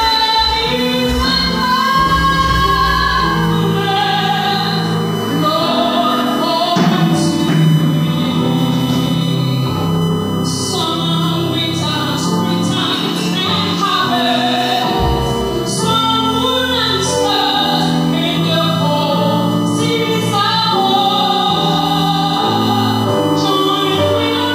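From start to finish a fixed-pitch USB whine runs under the sound. It is built on 1 kHz, and its strongest component sits at 3 kHz, the third harmonic. The level is roughly 15 dB below the signal. The current drawn by a USB bus in 1 ms frames has leaked in through the power or ground. On a spectrogram this appears as thin, perfectly horizontal lines at 1 kHz and its multiples, brightest at 3 kHz.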